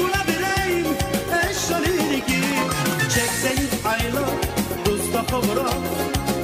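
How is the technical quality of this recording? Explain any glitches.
A train of clicks runs from 1.48 to 2.93 s, about 9.7 clicks per second at a regular spacing, roughly fifteen in all. The likely cause is a repeating electrical pulse getting into the signal path, from interference by nearby equipment or from a faulty connection or power supply. Each click has much the same shape and stands around 10 dB above the surrounding sound, so the stretch is heard as steady ticking laid over the audio.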